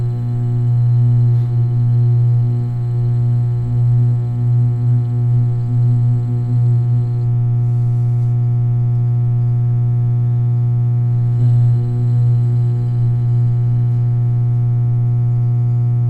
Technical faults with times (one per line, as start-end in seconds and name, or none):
none